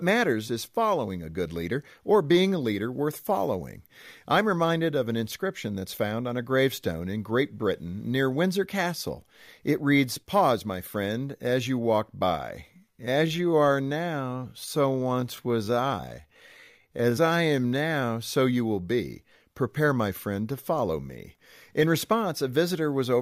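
From 12.70 to 18.08 s, after "as you walk by" and until "so you will be", a time-stretched section plays at about 0.67 times normal pace with unchanged pitch, likely from software repeating short pieces. It drags; a spectrogram shows harmonics at normal heights but horizontally drawn out.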